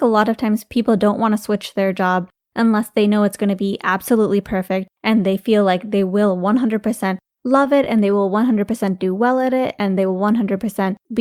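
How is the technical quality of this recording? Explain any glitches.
Two delivery faults affect the speech, both from the receiver's jitter buffer.

From 7.27 to 8.25 s there are repeated stalls (stutter). The buffer ran dry eight times, each gap at most 12 ms and filled by continuing the last sound. Speech hitches without losing content, and the waveform shows brief repeated slices.

From 9.19 to 9.88 s a jitter buffer slow-down adds 68 ms by repeating pitch periods. Speech plays at 91% speed with unchanged pitch, and the spectrogram shows harmonics stretched horizontally.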